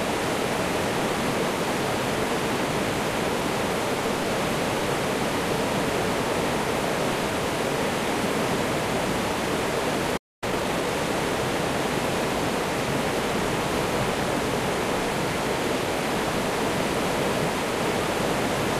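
At 10.17 s the audio drops to silence for about 249 ms, until 10.44 s. This playback stall likely came from the player running out of data. From 10.44 s to 10.92 s, time-compressed catch-up plays the backlog at 1.5 times speed. Small pieces are cut and cross-faded, so the sound hurries at normal pitch.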